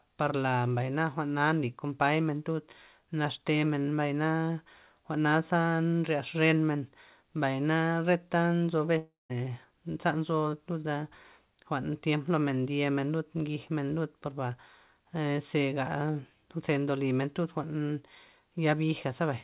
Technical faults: long network dropout

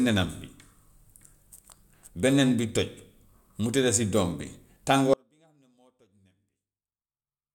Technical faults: audio dropout to a faint residue

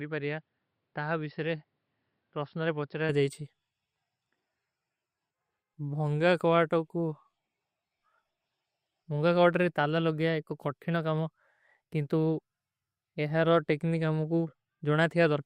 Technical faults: input switched to a poorer device

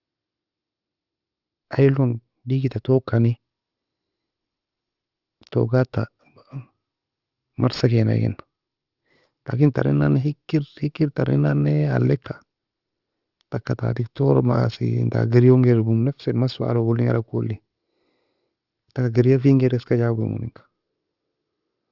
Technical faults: aliasing

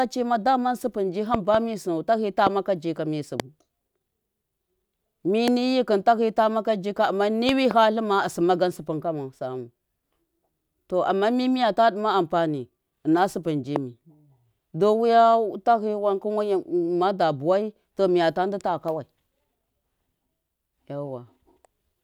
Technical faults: loud pop

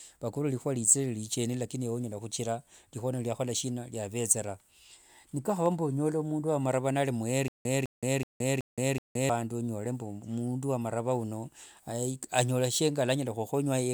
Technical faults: stutter with silent gaps

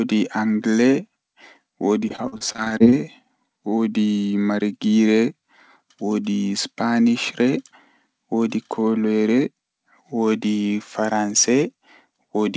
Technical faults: repeated packet loss (robotic sound)

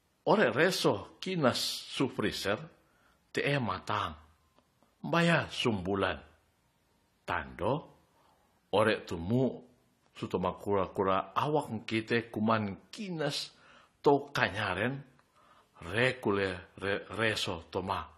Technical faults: AAC compression

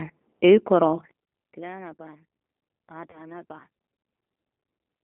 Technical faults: G.729 codec; VoIP packet loss concealed by the speech codec

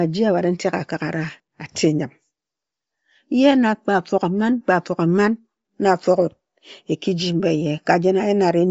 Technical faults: Bluetooth LC3 compression

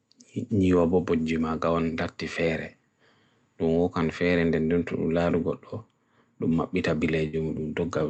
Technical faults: burst of packet loss

